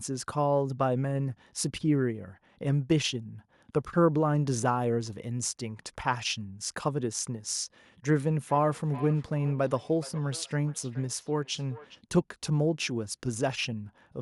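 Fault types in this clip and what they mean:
Feedback echo between two devices, 8.19 to 12.01 s: the speech returns at a steady interval of roughly 400 ms, each return thinner and more ringing than the last, peaking at about 20 dB below the direct speech. Two devices in the same room are on one call, and one plays out what the other's microphone sent. That microphone captures the sound again, and since each echo canceller removes only its own device's playback, the sound keeps circulating.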